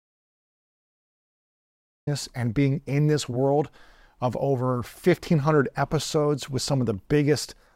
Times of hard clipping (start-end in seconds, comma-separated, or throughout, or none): none